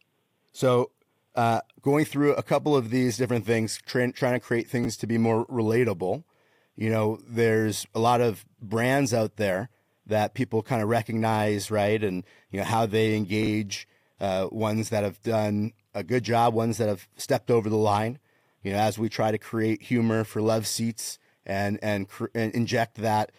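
Chunks out of order at 3.77–3.80, 4.84–4.86 and 13.43–13.47 s: 10 ms blocks play one to three chunks late, leaving brief jumbled moments with hard joins.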